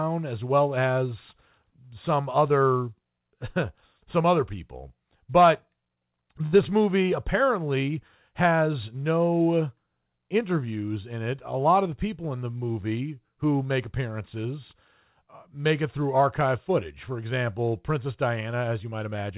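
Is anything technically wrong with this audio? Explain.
Yes, there are two jitter-buffer faults.

From 6.46 to 6.55 s, just before "movie apparently has no", one sound is held unnaturally long, with a faint buzzy smear instead of a clean transition. This is a short stall from a late packet. Its audio had not arrived when it was due, so the jitter buffer ran dry. The receiver stretched the preceding sound for about 66 ms to cover the gap, then resumed from the same point. Nothing is lost, but the speech is delayed by that amount.

From 18.84 to 19.32 s, the speech suddenly sounds hurried, running at about 112% of normal speed while the pitch stays unchanged. This is a jitter buffer speed-up. The buffer had built up more audio than it wanted, so the receiver repeatedly cut out tiny slices, each one or a few pitch periods long. Together they remove roughly 70 ms to bring the delay back down.

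The audio passed through a call path whose band ends at 4 kHz, which fits G.711 mu-law coding.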